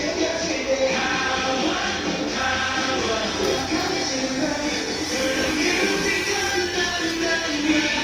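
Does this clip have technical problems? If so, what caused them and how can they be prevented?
Yes. Throughout, a likely low-bitrate Opus compression pass in CELT mode starved the bands of bits, leaving tones plainly grainy, rough and noisy, consistent with roughly 24 kbps. Prevent it by encoding at a higher Opus bitrate or keeping a lossless master.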